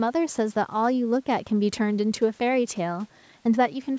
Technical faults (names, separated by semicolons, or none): none